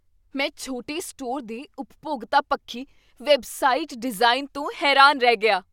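A short bit of speech with nothing technically wrong to point at anywhere in it.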